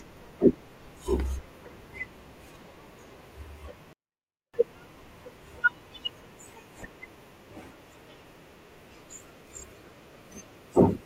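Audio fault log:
3.93–4.54 s, 24-bit alignment error (too quiet): the speech stays clean but drops by about 48 dB at once, nearly vanishing. This fits 24-bit samples held in the low bytes of 32-bit words being read as full 32-bit values, so each sits 256 times too small.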